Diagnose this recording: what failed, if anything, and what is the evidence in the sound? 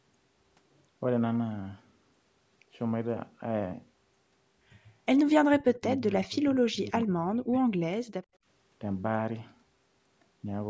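Call processing stage: from 5.45 to 7.68 s the speech keeps dipping, by as much as about 35 dB, across roughly a second and a half. That's speech suppressed in double talk, likely the echo canceller ducking everything while both sides spoke.

Also call processing: between 5.75 and 5.96 s there's a faint copy trailing 86 ms behind, about 35 dB down. That's echo leak, likely loudspeaker pickup the loudspeaker side's canceller didn't fully remove.

Call processing again: at 8.3 to 8.41 s the room tone drops about 24 dB for around 70 ms, then springs back. That's background gated by the echo canceller, which clamped the mic briefly.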